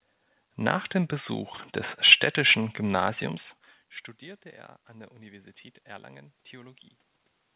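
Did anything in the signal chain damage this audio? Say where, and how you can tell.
Yes. Clicks recur every 0.6 s from 0.10 s to 7.30 s, about fifteen in all, which points to the driver or buffer stage. These are likely clock drift buffer slips: two clocks a few hundred ppm apart make the buffer periodically drop or repeat a few samples.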